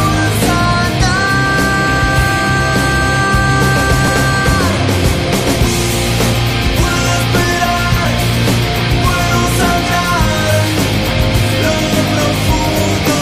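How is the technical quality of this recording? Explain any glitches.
There are two small glitches, at 4.08 s and 12.05 s. Both are overlap between stream segments: neighbouring segments claim the same few milliseconds, so the player trims about 5 to 6 ms of real audio. The waveform jumps, giving a tiny skip. The spacing fits 4-second segments.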